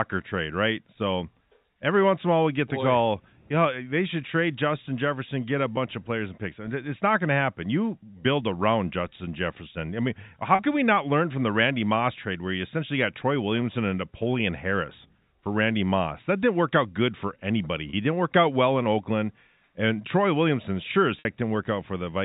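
Packets were dropped in four places, and each time the receiver patched the gap with packet loss concealment by pitch repetition, replaying the last pitch cycle. The 10 ms gap at 5.76 s, between "get a" and "of players and picks", is a barely held buzz. Longer holes, 40 ms from 10.55 to 10.59 s after "I mean" and 30 ms at 17.90 to 17.93 s, give a longer frozen, buzzy tone inside the band-limited telephone sound, and the 60 ms hole at 21.19 to 21.25 s after "sure as" fades into silence before the speech returns with a short cross-fade.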